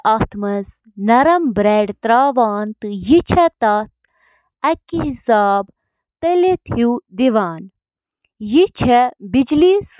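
No technical faults can be heard anywhere in the speech recording, with the signal holding steady and continuous throughout.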